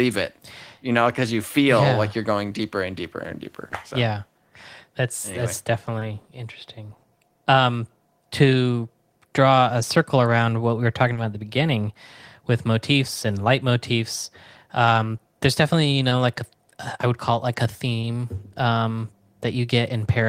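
Brief smears and wobbles break the speech at 5.99, 7.27, 11.13, 15.17, 16.09 and 18.01 s. This is short concealed packet loss: 20 ms of audio each time (40 ms at 11.13 s) arrived too late, and the decoder bridged the gap by extending the preceding sound before blending back.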